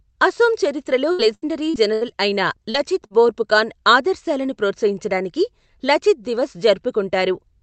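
From 1.11 to 2.12 s, right after "అసోం చరిత్రలో", repeated packet loss (robotic sound) sets in. Four holes, the longest 74 ms, are patched by stretching the last sound. Because they recur so closely, the speech turns choppy rather than briefly smeared.

At 2.70 to 2.77 s and again at 3.06 to 3.13 s, just before "బోర్ఫుకాన్ ఆదర్శాలను ప్రోత్సహించడానికి లచిత్", there is short concealed packet loss. Each event is an isolated 40 ms gap filled in and blended back, heard as a quick smear or wobble with no sustained robotic texture.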